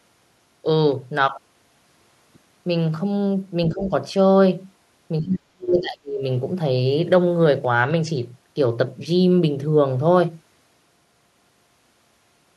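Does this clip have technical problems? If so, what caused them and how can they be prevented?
Yes. The speech dips briefly from 3.68 to 3.92 s, then drops sharply, by roughly 35 dB, from 5.21 to 6.23 s, likely speech suppressed in double talk: the echo canceller could not separate this side's talker from the overlapping far-end loudspeaker echo and attenuated both. Better double-talk detection with adaptive rather than hard suppression prevents this.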